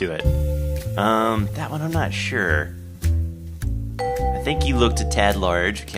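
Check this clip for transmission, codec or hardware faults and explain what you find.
No fault can be heard anywhere in the clip. There is nothing to point to at any moment in the recording.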